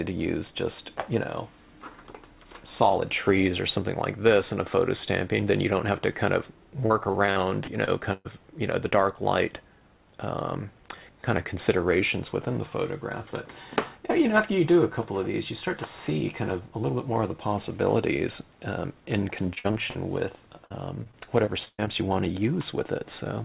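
Repeated packet loss (robotic sound) occurs at 6.86–8.27 s, 19.55–19.97 s and 20.65–21.88 s. Packets drop out again and again, and each hole is patched by stretching the preceding sound, leaving choppy audio with gaps of up to about 120 ms. Nothing is heard above 4 kHz, which fits a narrowband G.711 call path.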